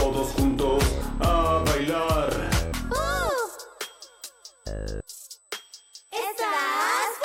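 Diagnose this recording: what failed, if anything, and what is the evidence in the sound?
There's USB whine running under the whole clip: a steady, fixed-pitch tone at 8 kHz, loudest at its 16 kHz harmonic, sitting roughly 30 dB below the signal. That's an analogue wiring fault, with 125-microsecond USB microframe current bleeding into the audio through shared power or ground.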